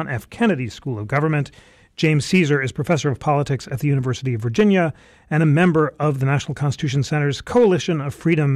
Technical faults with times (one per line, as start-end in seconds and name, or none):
0.00-8.55 hard clipping